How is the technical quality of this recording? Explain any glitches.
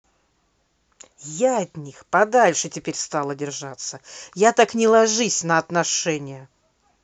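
The speech has one degradation. From 1.83 to 4.92 s a congested Bluetooth link triggered an SBC bit pool drop, consistent with the bit pool falling from 31 to 14, near 99 kbps. Starved of bits, the upper sub-bands get few or no bits and the rest are coarsely quantised, so the treble turns dull and a gritty noise rides on the speech until the rate recovers.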